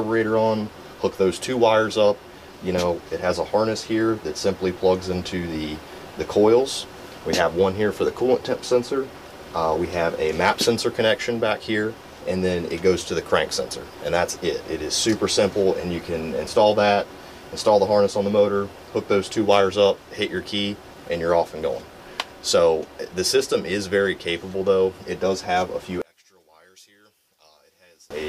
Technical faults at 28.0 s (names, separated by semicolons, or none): one channel inverted